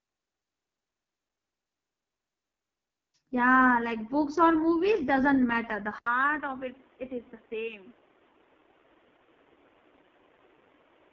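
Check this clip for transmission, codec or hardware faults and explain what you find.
Two faults are present: heavy codec damage across the whole clip, and a change of input partway through.

AMR wideband (HD Voice) codec, throughout: the speech was squeezed through AMR-WB at its very lowest rate; the coarseness points to about 6.6 kbit/s. At that rate the vocal tract model has too few bits to track the voice, so the speech comes out rough and raspy, with a buzzy, grainy edge. Nothing survives above 7.4 kHz, and the top band is synthetic noise rather than real detail.

Input switched to a poorer device, from 5.98 s to the end: the system likely moved to a different microphone or a headset's call profile. The switch brings an 80 ms gap of silence, and then everything above 3.8 kHz is gone, so the speech turns dull and boxy on top of the codec rasp. The level also drops by a few decibels, and a new background hiss sits well below the speech.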